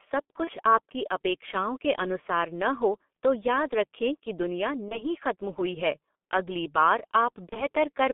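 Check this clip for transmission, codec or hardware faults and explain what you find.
Two faults are present: heavy codec damage throughout, and three packet-loss concealment events.

The G.723.1 codec is active across the whole recording, passing roughly 200 Hz to 3.5 kHz, with a sound that fits about 6.3 kbit/s. Its slow 30 ms model updates leave speech muffled and hoarse, with smeared consonants.

VoIP packet loss concealed by the speech codec occurs at 0.44–0.51 s, 4.89–5.04 s and 7.49–7.66 s. Each event points to a single lost 30 ms frame. The decoder extrapolates from its last pitch and filter into a fading buzzy tone or coloured noise, and the voice stays weak or distorted briefly after recovery.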